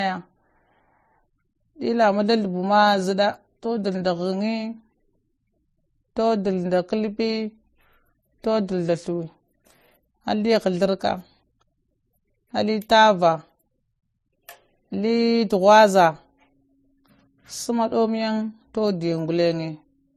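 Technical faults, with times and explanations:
Throughout, transcoding between lossy codecs: nothing above 13.9 kHz, a hard spectrogram ceiling, with layered smeary artefacts, likely from low-bitrate MP3 re-encoded to AAC.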